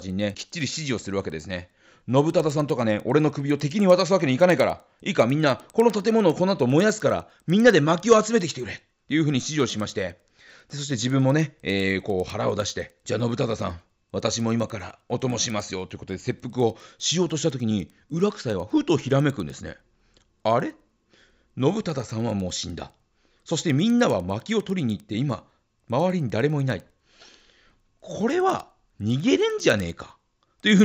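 Throughout the speech, a resampler restarted on every block leaves faint ticks at a steady 10 per second. Each 100 ms block went from 16 kHz to 48 kHz in isolation, erring at its edges. Unlike dropout clicks, these are perfectly regular and vanish in pauses.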